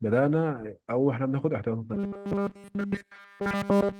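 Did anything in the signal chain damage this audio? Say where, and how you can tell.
Yes: robotic sound from repeated short buffers at the buffer stage. From 1.94 s onward the speech collapses into a rigid 200 Hz buzz, likely one 5 ms buffer looping.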